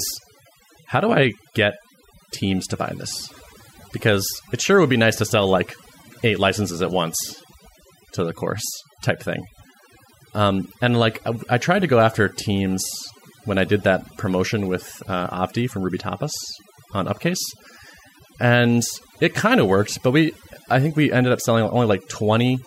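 From start to finish the background sits near silence, broken by twinkling specks. This is overdone noise removal: noise reduction set too strongly switches off frequency bands close to its noise estimate, taking quieter parts of the speech along.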